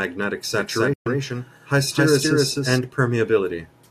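A second, slower capture path was likely mixed in from 0.57 to 2.79 s, creating a doubled audio track: an equally loud, dry copy of the speech trails about a third of a second behind. At 0.93 s a digital broadcast dropout occurs as the receiver mutes on failed frames; the sound fades out within 8 ms and stays silent for 120 ms, which fits about five lost frames, until 1.07 s.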